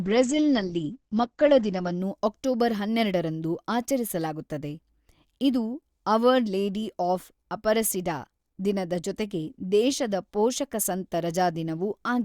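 For the first 2.0 s the speech is dull, with nothing above 8.5 kHz, then abruptly sharpens: an adaptive stream starting at a low bitrate, consistent with roughly 12 kbit/s Opus stepping up to 64 kbit/s.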